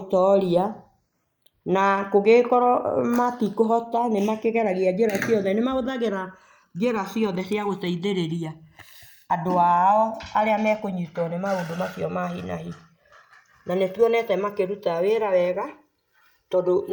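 Speech, with the two channels drifting apart throughout. They seem to run on separate clocks, roughly 150 ppm apart. The delay between them creeps up to around 2 ms by the end. Summed to mono, comb notches sweep slowly through the spectrum, heard as gradual flanging.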